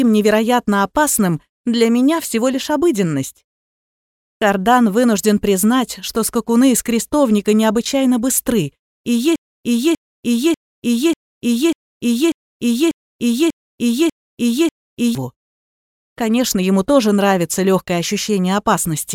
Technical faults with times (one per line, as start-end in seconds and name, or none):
9.36-15.15 broken-record loop